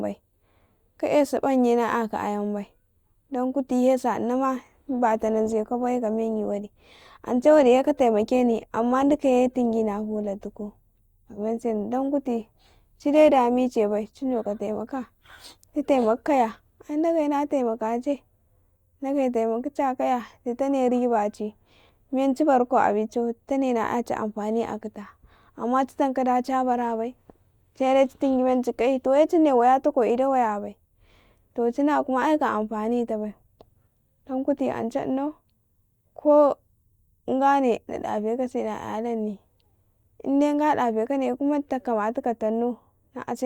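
At 4.53 s the speech turns abruptly rougher, with more audible codec artefacts. There is no gap or dropout. At 16.53 s, twelve seconds later, the clarity snaps back just as suddenly. This is an adaptive stream at a lower bitrate. The player switched to a cheaper encoding while the connection slowed, and the change in sound fits a step from about 64 to 32 kbit/s Opus.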